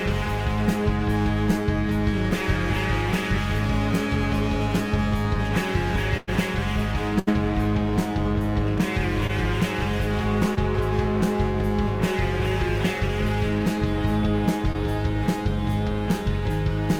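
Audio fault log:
6.17–6.29 s and 7.19–7.29 s, burst of packet loss: about 100 ms and then 80 ms of audio failed to arrive, so the receiver stretched the last sound and faded it, leaving a held buzz or fading hiss. Playback then resumes further on, with the stretch in between gone, which sets these apart from the brief patches.
9.27–9.31 s, 10.55–10.59 s, 14.73–14.76 s, short concealed packet loss: about 20 ms went missing each time and was filled by continuing the preceding sound before blending back into the real audio. The result is a quick smear or wobble.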